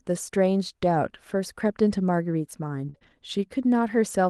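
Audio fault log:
2.89–2.96 s, burst of packet loss: the sound is carried on for about 48 ms as a held, fading continuation of what came before, then jumps ahead with about 40 ms missing. That skipped stretch distinguishes it from the brief smear of a short concealed loss.
2.94–2.96 s and 3.03–3.13 s, lost packet rebuilt from error correction: one packet, then three, were replaced by the low-bitrate copy carried in the following packet, about 20 ms and 60 ms in all. Nothing drops out; those frames just turn rougher and noisier.
2.98–3.03 s, short concealed packet loss: about 20 ms never arrived, so the decoder extended the preceding sound for about 24 ms and blended back. It is a quick smear or wobble, unlike the burst just before it.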